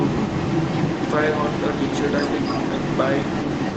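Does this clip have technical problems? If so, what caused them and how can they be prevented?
Yes. At one end, the call was likely played on a loudspeaker whose echo canceller let the microphone pickup through. This echo leak runs through the whole clip: the speech returns about 272 ms late, roughly as loud as the original. Using headphones at that end, or an echo canceller that fully converges, prevents it.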